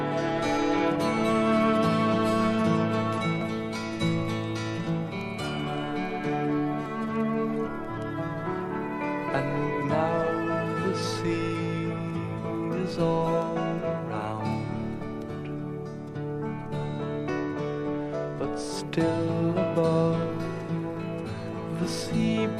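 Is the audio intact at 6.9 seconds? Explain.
No. At 6.86 s the sound jumps ahead, losing roughly 5 ms with no gap of silence. This is likely a dropped buffer (overrun): the samples were overwritten before being read, so both sides were spliced together.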